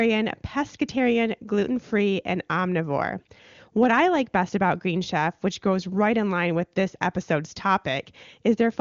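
No technical faults are audible.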